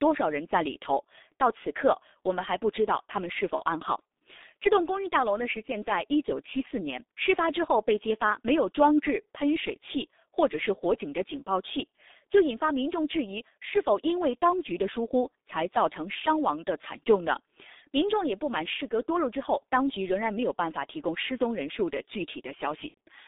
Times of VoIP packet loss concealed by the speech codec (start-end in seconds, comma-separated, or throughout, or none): 3.56-3.62, 22.88-22.97